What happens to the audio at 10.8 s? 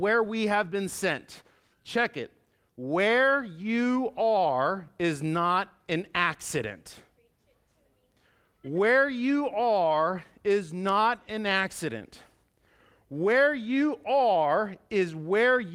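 At 10.8 s the audio is intact, with the speech continuing cleanly and no dropout, click or distortion at that point.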